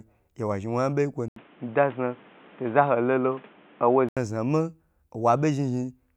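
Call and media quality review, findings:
Band-limited, boxy speech 1.28–4.17 s, 80 ms gap at switch-in; nothing above 3.8 kHz, level shifts by a few dB, new noise floor about 30 dB down. Likely input switched to a poorer device, narrower capture path, then restored.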